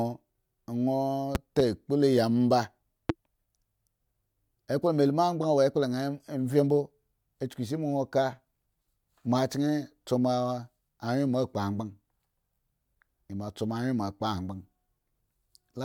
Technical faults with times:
1.35-1.62 loud pop
3.09-3.12 loud pop

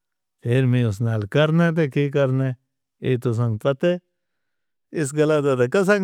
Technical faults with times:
none

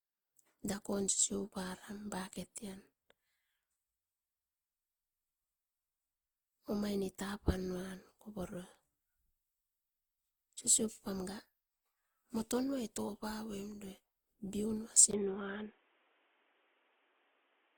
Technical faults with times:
0.00-17.77 generation loss
15.11-17.77 input switched to a poorer device

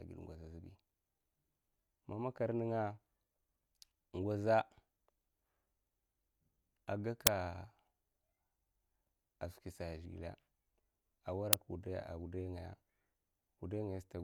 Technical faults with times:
7.27 uninitialised buffer
11.53 uninitialised buffer

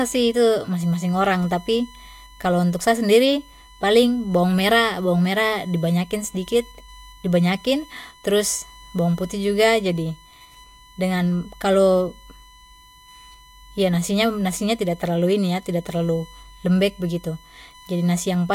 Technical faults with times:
0.00-18.54 USB whine

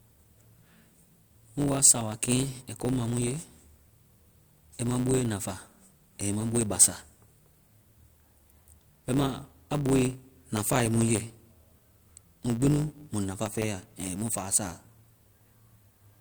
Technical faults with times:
0.00-16.20 block size mismatch (truncated)

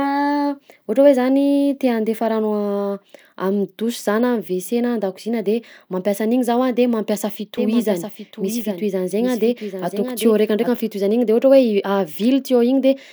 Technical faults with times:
7.57-10.69 doubled audio track

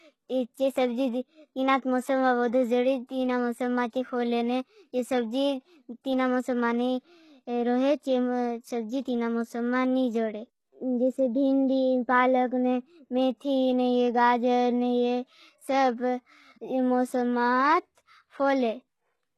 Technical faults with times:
0.00-19.38 HE-AAC compression

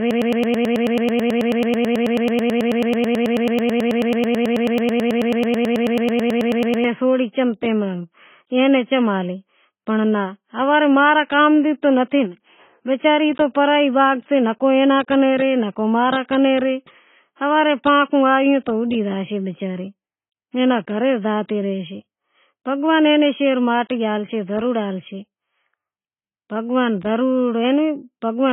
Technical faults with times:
0.00-28.52 AAC compression
0.00-6.84 broken-record loop

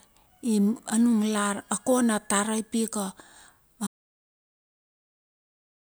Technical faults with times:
3.87-5.89 audio dropout to silence

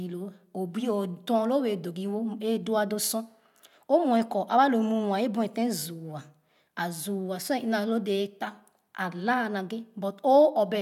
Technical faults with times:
none

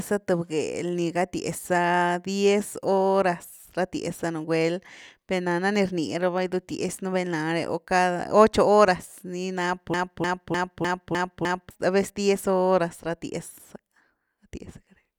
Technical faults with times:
9.94-11.71 broken-record loop

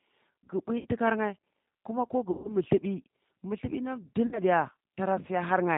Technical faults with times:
0.00-5.78 G.729 codec
0.78-0.87 VoIP packet loss concealed by the speech codec
2.31-2.56 VoIP packet loss concealed by the speech codec
4.27-4.39 VoIP packet loss concealed by the speech codec

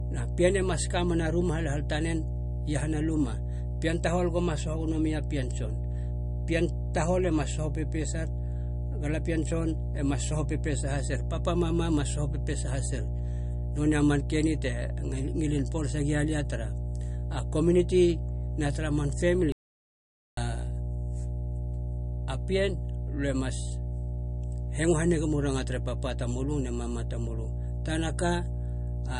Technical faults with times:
0.00-29.19 mains hum
0.00-29.19 MP3 compression
19.52-20.37 audio dropout to silence

